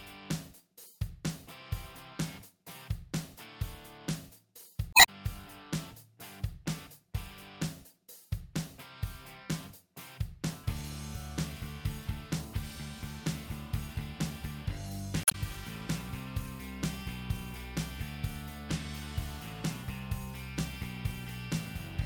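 Damaged data in a compressed stream breaks the audio twice, from 4.90 to 5.09 s and from 15.23 to 15.35 s, each as a brief chirp, squawk, click or short hole. Corrupted bytes in the encoded file make the decoder misread those frames and lose sync until it locks onto a later frame header.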